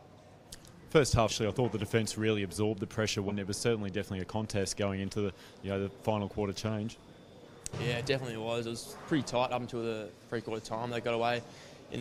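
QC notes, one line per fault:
1.28–1.32 s, compressed frames skipped: roughly 0.3 s of audio vanishes and the sound jumps forward, which fits around seven dropped frames of about 46 ms each.
3.28–3.32 s, compressed frames skipped: a longer jump of about half a second, which fits roughly ten missing or rejected frames of about 46 ms.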